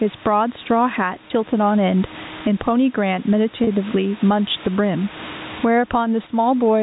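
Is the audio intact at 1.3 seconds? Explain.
No. At 1.30 s the sound is at the end of a packet loss with pitch repetition that runs from 1.28 to 1.30 s. About 20 ms of signal went missing, which fits two consecutive 10 ms packets being dropped. The receiver filled the hole by looping the last pitch period it had received. With so short a gap the fill is heard as a brief, slightly held buzz rather than a dropout to silence.

Gain pumping is also present at this moment, as it is across the whole clip. The level swings by around 20 dB, so loud and quiet passages sit unnaturally close together and the sound is squashed. The likely cause is input gain set far too high for the microphone, with a fast limiter or compressor clamping it down on each peak.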